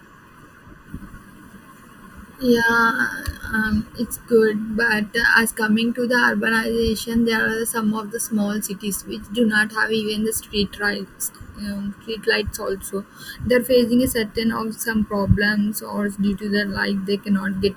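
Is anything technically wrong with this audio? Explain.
Yes. Throughout the speech there is channel delay (comb filtering): one channel lags the other by under a millisecond, and summing them cancels shared content near 700 Hz and at evenly spaced frequencies above it. This makes the sound hollow and phasey, with fixed dark horizontal notch bands on a spectrogram.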